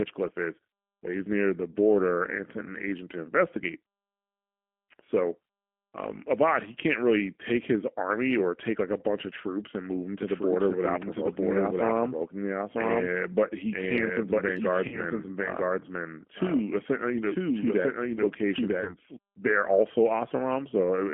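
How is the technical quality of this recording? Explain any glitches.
The recording has three faults: constant low-bitrate codec damage, a second copy of the audio overlaid for about nine seconds, and two brief dropouts covered by concealment.

Throughout, the speech goes through a G.729 codec at 8 kbit/s, most likely G.729A, on a line limited to 200 Hz to 3.4 kHz. The codec rebuilds the speech from a vocal tract filter and a pitch predictor plus a few pulses per frame, and the damage is plainly audible as a thin, slightly rough, synthetic quality.

From 10.21 s to 19.17 s the speech is heard twice: a full-band copy, about as loud as the original, runs roughly a second behind it, with no reverb tail or room colour, and starts and stops abruptly. The likely cause is a doubled audio track, either captured again through a slower path or left out of step in an edit.

VoIP packet loss concealed by the speech codec occurs at 14.88–15.02 s, where about 40 ms of audio is missing, which fits two lost packets. 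It occurs again at 18.84–18.95 s, where 20 ms is missing, consistent with one packet. In each case the decoder extends its last pitch and filter state with falling gain, so the sound smears into a buzzy tone or coloured noise that fades. Each frame builds on the previous one, so the speech stays weakened for a short while after packets return.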